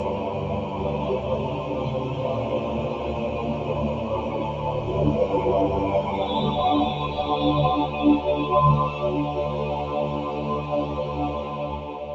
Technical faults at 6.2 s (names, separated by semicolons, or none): noise suppressor applied to music or sounds